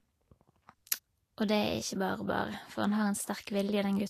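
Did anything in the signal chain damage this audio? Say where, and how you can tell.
Yes. Throughout the speech the treble is hissy and grainy, tones sound roughened, consonant attacks are smeared, and nothing is present above 14.1 kHz. That points to the codec stage, most likely Vorbis compression at a low quality setting, which fits a bitrate in the high thirties of kbps. The encoder cut the band at 14.1 kHz and quantised the upper residue so coarsely that fine detail was replaced by noise of similar energy.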